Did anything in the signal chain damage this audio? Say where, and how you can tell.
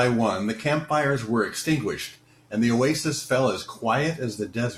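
Yes. There is an overlap between stream segments at playback, around 2.16 to 2.19 s. About 30 ms of speech is cut, so the waveform jumps and the speech skips.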